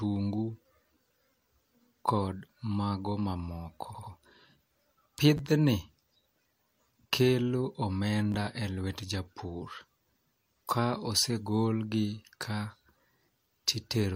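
Repeated frames at 3.90 to 4.08 s, right after "kod mago mamoko", make this speech clip stutter: an 85 ms block, which fits a pair of compressed frames, is played two extra times, lengthening the audio by about 171 ms. Chunks out of order at 5.37 to 5.39 s and 8.32 to 8.35 s, just before "e lwet japur", give brief jumbled moments: a 10 ms chunk arrives late, by one chunk and then by two, and plays after the audio that should follow it.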